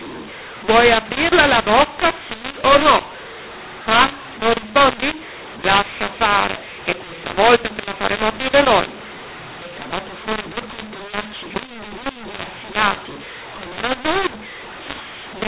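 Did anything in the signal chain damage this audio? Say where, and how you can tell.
Yes. The speech sounds harsh and gritty from start to finish, with loud and soft passages scrambled in level, and the pauses between phrases fill with a hiss where near-silence should be. That is mu-law and A-law mixed up at the decoding stage: the G.711 telephone signal was encoded with the mu-law curve but expanded with the A-law table. Each 8-bit code then maps to the wrong amplitude, pushing quiet samples well above silence and distorting every level.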